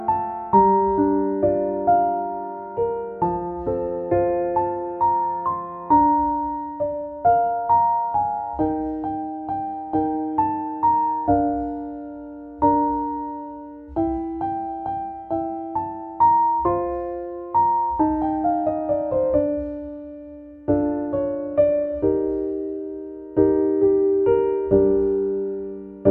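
Nothing stood out on listening to the audio.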